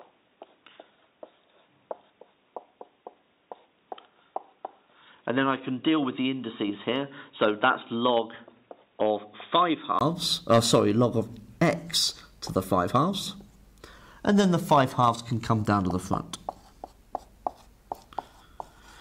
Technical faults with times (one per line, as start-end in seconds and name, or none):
0.00-10.01 input switched to a poorer device